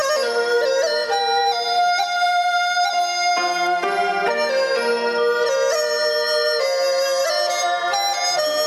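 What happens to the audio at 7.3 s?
At 7.3 s the audio is caught in the gain pumping that runs through the whole clip. The level swings by around 10 dB. The likely cause is gain set far too high, with a fast limiter or compressor clamping down on every peak. On a waveform the envelope looks squashed and flat-topped.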